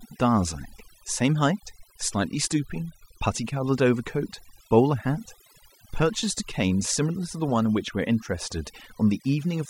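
From start to finish, the speech carries overdone noise removal. A noise reduction stage set too aggressively has pulled individual frequency bands down toward silence whenever they sat near its noise estimate. Quiet speech detail went too. The gaps sound hollow and twinkly.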